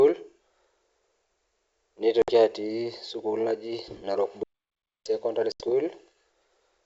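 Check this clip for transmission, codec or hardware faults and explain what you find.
Three faults are audible in this speech: two packet-loss gaps and one playback stall.

Packet loss on an ADPCM call occurs at 2.22 to 2.31 s, with about 60 ms lost, and at 5.52 to 5.63 s, with about 80 ms lost. Each gap is a sharp-edged hole of silence. The receiver's predictor and step size no longer match the sender's, so the speech comes back with brief, slight distortion.

A playback stall runs from 4.43 to 5.06 s, a silence of about 0.62 s. The speech stops abruptly in mid-flow, then resumes. The likely cause is the player running short of data or its thread being blocked.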